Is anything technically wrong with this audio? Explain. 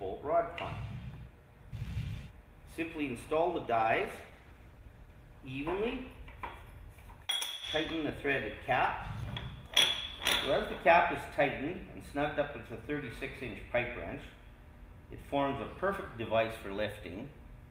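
Yes, a call bitrate drop from 3.51 to 6.27 s, worst for about 1.7 s. A falling bandwidth estimate starved the encoder, consistent with roughly 48 falling to 18 kbps. The audio turns coarse and muffled, and the spectrogram loses its upper band until recovery.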